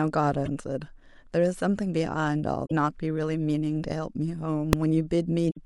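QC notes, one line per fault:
0.45–0.48 s, 2.63–2.72 s and 5.49–5.57 s: damaged data in a compressed stream. Corrupted bytes make the decoder misread these frames and lose sync until it finds the next valid frame header, so each spot is a brief chirp, squawk, click or short hole cutting into the speech.
4.73 s: invalid numbers at full scale. A processing step produced infinite or undefined values that were clamped to the maximum level. The block lasts only about 1.33 ms, which fits a 64-sample block, so it sounds as a single sharp bang.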